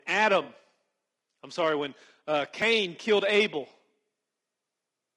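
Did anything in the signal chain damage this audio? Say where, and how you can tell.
Yes. Low-delay AAC compression, likely AAC-ELD at around 32 kbps, is at the codec stage and runs throughout. The speech sounds rough and grainy, with noise filling the gaps between harmonics. The short frames this codec uses resolve pitch poorly and spend bits thinly at that rate.

AAC frame loss with concealment comes from the network or decoder and runs from 0.43 to 0.49 s. A patch of about 40 ms turns smeared and noisy, which fits a couple of lost frames. The decoder filled the hole from the last good spectrum instead of real audio.

A repeated buffer sits at the driver or buffer stage at 2.62 s. Instead of a stutter, there is a brief click or buzz. A tiny block of about 1.33 ms, consistent with a 64-sample buffer, played two extra times when new audio arrived late, leaving hard joins at each repeat.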